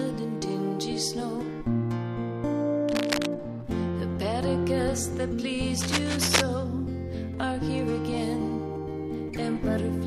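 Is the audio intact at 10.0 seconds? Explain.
Yes, the audio is intact at 10.0 seconds, with nothing at that moment that breaks or disturbs the signal.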